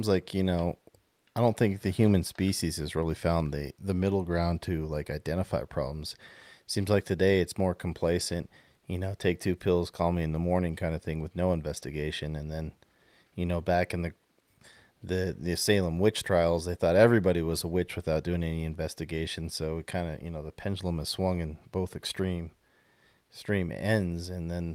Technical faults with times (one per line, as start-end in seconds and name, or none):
none